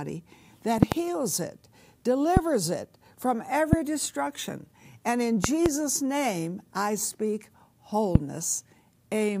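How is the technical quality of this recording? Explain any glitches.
The recording is marred by repeated loud pops. A likely voltage glitch, such as a switch, plug or static discharge, injects sharp pulses that jump far above the speech, which carries on underneath. They occur at 0.83–0.94 s (two pops), 2.37–2.39 s, 3.73–3.75 s, 5.44–5.68 s (two pops) and 8.15–8.18 s.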